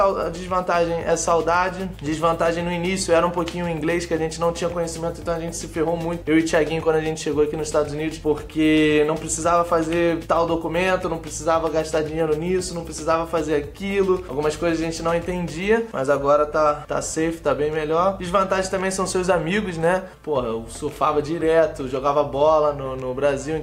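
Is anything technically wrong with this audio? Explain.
No, nothing technically wrong is audible anywhere in the recording.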